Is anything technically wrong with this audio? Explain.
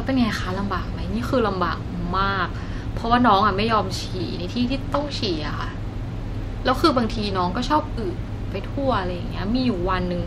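Yes. From 4.82 to 7.39 s the speech takes on a rough, metallic edge: periodic clock jitter, where interference near 1 kHz wobbles the converter clock, adding sidebands around every component.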